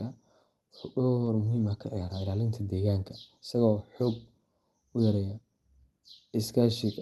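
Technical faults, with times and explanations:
1.25–1.27 s, short concealed packet loss: 10 ms never arrived, so the decoder extended the preceding sound, giving a brief smear rather than a silent gap, just before "muhiim ah ka ciyaaraa".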